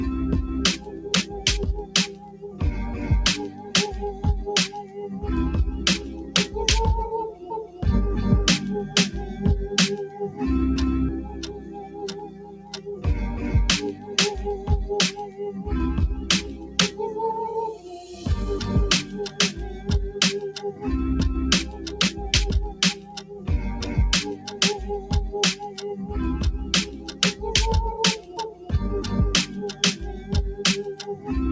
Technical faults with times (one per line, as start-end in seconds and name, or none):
0.00-31.52 noise suppressor applied to music or sounds
0.76-4.99 sound cut by the noise suppressor
6.10-7.82 sound cut by the noise suppressor
10.08-25.81 sound cut by the noise suppressor
26.85-31.28 sound cut by the noise suppressor